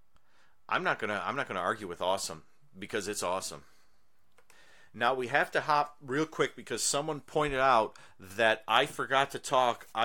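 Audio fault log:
No faults can be heard in the speech. Nothing in the recording needs a timed entry.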